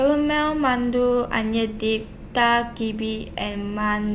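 No technical faults can be heard in the speech, which has passed through a call path whose narrowband coding leaves nothing above 4 kHz, a limit that fits the G.711 A-law codec.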